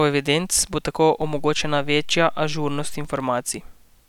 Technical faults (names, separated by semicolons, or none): DC step